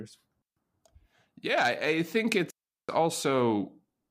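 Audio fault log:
0.42 to 0.57 s and 2.50 to 2.89 s, digital wireless dropout. The speech cuts to near silence twice, for about 146 ms and then 382 ms, the second just after "I think". The receiver lost too much data and muted with a very short fade. No noise burst surrounds either gap.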